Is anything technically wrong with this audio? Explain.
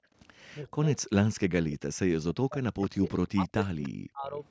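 Yes. At the very start, from 0.0 to 0.13 s, the echo canceller clamped the microphone while the far-end loudspeaker was active, so the background is gated by the echo canceller. The room sound drops by about 22 dB for that brief moment and then returns as the canceller releases.

From 0.53 to 3.05 s and again from 3.28 to 4.39 s, the speech dips and breaks up in pieces, with the deepest cuts around 40 dB. The likely cause is speech suppressed in double talk: with both sides talking at once, the canceller could not tell the near talker from loudspeaker echo and attenuated everything. About a second and a half of the first span is affected, and somewhat over half a second of the second.

Between 3.83 and 3.89 s a short, faint scrap of delayed sound comes through, roughly 25 dB below the main speech and trailing it by 0.31 s. This is likely an echo leak, where the far side's canceller failed to remove part of what its microphone picked up from its loudspeaker, and sent that residue back.

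The band stops at 8 kHz, consistent with call microphone processing.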